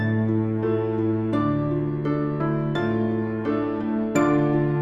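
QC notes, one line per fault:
No faults found in this clip.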